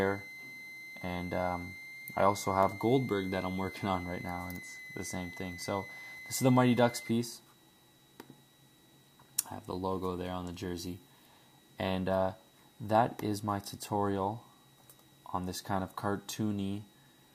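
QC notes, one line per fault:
0.00–7.11 s, switching supply whistle: a thin high whistle near 2 kHz sits under the sound, drifting between about 2.02 and 2.10 kHz, roughly 15 dB below it. A switching power supply is running in an audible burst mode or beating with another one. It stops at 7.11 s.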